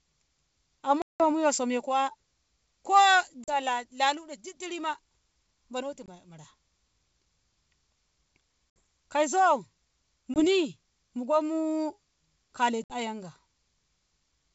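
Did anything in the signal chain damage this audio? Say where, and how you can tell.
Yes, network packet loss on the ADPCM call: silent gaps at 1.02, 3.44, 6.06, 8.70, 10.34 and 12.84 s, then brief wobble while the decoder's predictor and step size re-sync.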